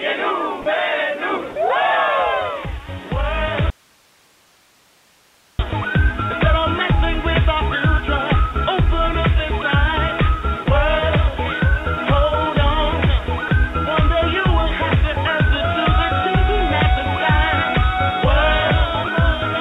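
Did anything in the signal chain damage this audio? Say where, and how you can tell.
Yes. At 0.62, 1.52, 10.64 and 13.48 s the sound briefly gives way to steady comfort noise for 20 to 40 ms, likely sound dropped by the voice detector in call processing.

From 3.70 to 5.59 s it cuts abruptly to faint hiss, about 35 dB down, then snaps back. That's an audio dropout to a faint residue, likely an input break while the path stayed live.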